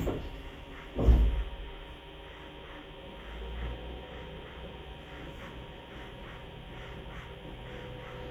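Listening closely to these everyday sounds, nothing stood out as a technical fault at any point.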